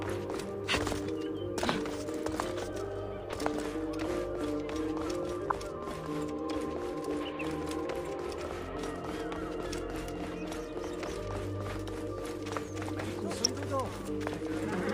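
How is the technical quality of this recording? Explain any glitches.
Two brief spots of DAB burbling spoil the result. One is at 5.50 s, the other runs from 13.44 to 13.49 s. Weak reception let bit errors slip past error correction into the MP2 data, corrupting samples so short blips of noise land in single sub-bands. You hear short noise blips, a bit heavier the second time.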